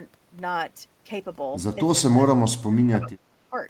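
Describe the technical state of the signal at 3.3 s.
At 3.3 s the speech is caught in a dip from 3.26 to 3.56 s, sinking by around 25 dB at its deepest. It sounds like speech suppressed in double talk, most likely an echo canceller mistaking the talker for loudspeaker echo and ducking everything.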